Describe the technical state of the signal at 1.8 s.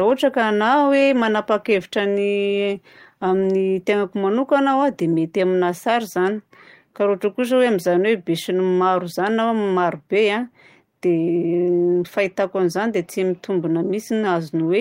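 At 1.8 s the speech signal is intact, with no audible fault at that point.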